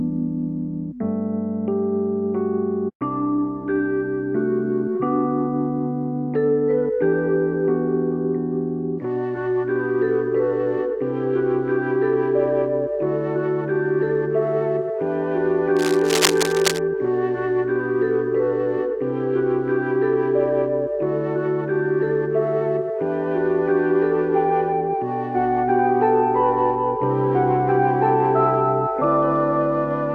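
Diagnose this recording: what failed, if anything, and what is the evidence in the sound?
The analogue wiring stage is the likely point of failure: a worn cable, connector or control appears to have been disturbed, so its contact resistance fluctuated rapidly while the signal passed through it. The result is cable scratch noise from 15.76 to 16.80 s, a dense, irregular burst of scratching and rustling laid over the sound for about a second. It sits only about 5 dB below the signal.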